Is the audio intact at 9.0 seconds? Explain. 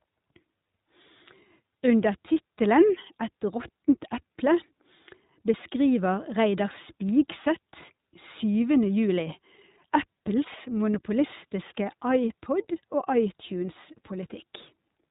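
No. At 9.0 seconds, as throughout the clip, the speech sounds band-limited, slightly rough and synthetic, with nothing above about 3.8 kHz. This is iLBC codec damage: each 20 ms frame's excitation is coded independently, which fits the 15.2 kbps mode.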